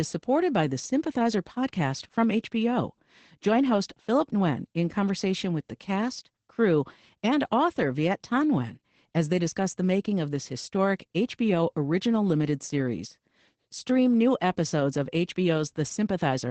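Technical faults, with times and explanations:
Throughout: Opus voice compression. The speech is clearly muffled, slightly hoarse and robotic, which fits SILK linear-prediction coding at around 12 kbps with a coarse excitation. A spectrogram shows an empty band above 9 kHz and smeared, blurred harmonics beneath it.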